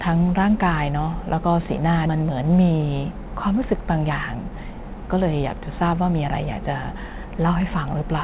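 A skip ahead at 2.06 to 2.08 s drops about a second of speech. Playback jumps straight to later audio with no filled gap, so the two sides butt together abruptly.

A jitter buffer speed-up follows from 2.16 to 6.99 s. The buffer trims short pitch-period pieces, removing roughly a third of a second, so speech runs at 106% speed with unchanged pitch and sounds slightly hurried. All of this sits on narrowband call audio with nothing above 4 kHz, which fits G.711 mu-law.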